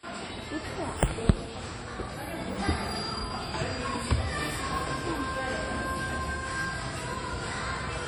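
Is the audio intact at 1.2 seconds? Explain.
No. At 1.2 seconds, as across the whole clip, the sound carries heavy damage that is likely WMA compression. This transform codec codes the signal in long blocks, so quantisation noise smears over tens of milliseconds around each event, and at a rate that points to roughly 32 kbps, weak spectral lines are discarded entirely. The result here is a ringing, washy texture with a hiss that swells and recedes along with the sound itself.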